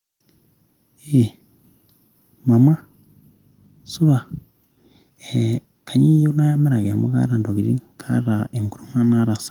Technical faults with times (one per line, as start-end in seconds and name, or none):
none